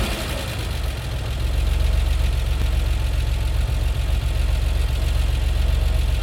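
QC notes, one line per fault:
2.62 s and 5.08 s: dropped buffer (overrun). Each time the sound jumps forward with no gap, losing roughly 4 ms at the first point and under 2 ms at the second. This is likely samples overwritten before being read, leaving the two sides joined abruptly.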